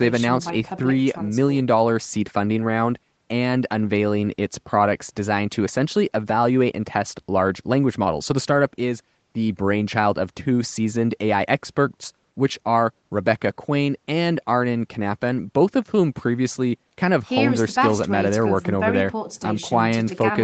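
The speech carries no technical faults, with its content stopping at about 8 kHz as expected from the call microphone processing and the Opus call path it came through.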